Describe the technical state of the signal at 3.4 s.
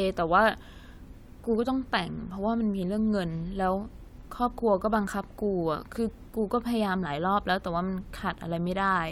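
At 3.4 s the speech signal is intact, with no technical fault present at that moment.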